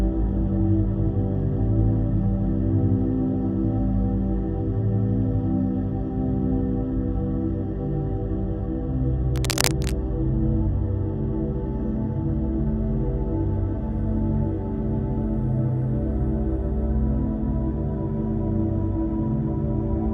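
A worn cable or connector was likely shifted from 9.36 to 9.92 s, its contact resistance jumping about as it moved. That produces cable scratch noise: dense, ragged bursts of scratching and rustling laid over the sound, reaching nearly the level of the sound itself before stopping.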